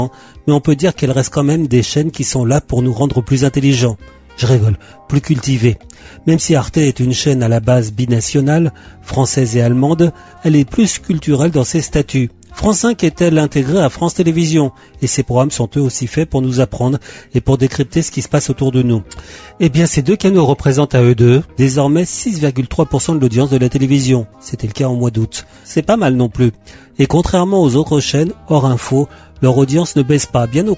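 No technical faults can be heard anywhere in the audio. Nothing in the sound calls for a fault report at any point.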